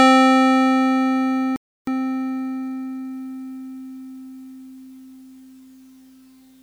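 At 1.56 s the music cuts out mid-flow and stays silent for about 0.31 s, resuming at 1.87 s. This is a playback stall, most likely the player running short of buffered data or having its output thread blocked until it could deliver samples again.

From 1.87 s to 3.11 s the music sounds hurried at its normal pitch. This is time-compressed catch-up: the player works off its backlog by dropping and cross-fading small slices, playing about 1.25 times faster.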